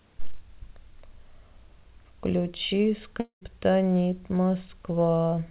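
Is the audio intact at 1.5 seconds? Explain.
Yes, the speech at 1.5 s is intact, carried cleanly through the WebRTC call path, whose G.711 mu-law coding leaves nothing above 4 kHz.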